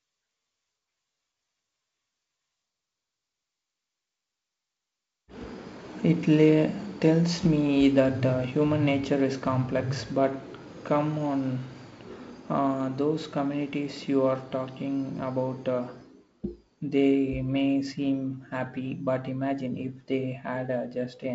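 No technical faults are audible.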